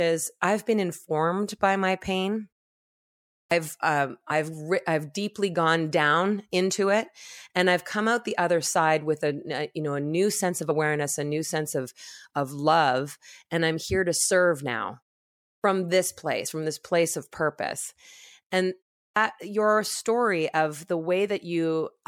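Clipped start after a pause at 3.4 s: after almost a second of silence, the first 113 ms of speech are missing, so the onset begins abruptly. The output device went idle during the gap and was still waking when the sound resumed.

Compressed frames skipped at 4.3 s: the audio jumps ahead by about 30 ms, a single 26.1 ms frame the decoder never played.

The same single-frame skip recurs at 10.7 s, right at "a new sense of".

A clipped start at 15.53 s loses 111 ms after a 0.57 s pause.

At 16.45 s, just before "from this place of", about two frames (roughly 50 ms) drop out.

Finally, at 19.05 s, between "place of purpose and" and "your story of", a pause of only 0.3 s costs another 117 ms of onset. Even that short pause was enough for the device to go idle.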